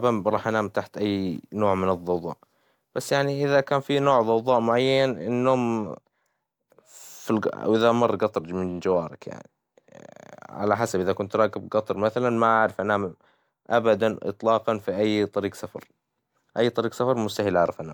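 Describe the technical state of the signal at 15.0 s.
At 15.0 s the speech signal is intact, with no audible dropout, distortion or other technical fault at that point.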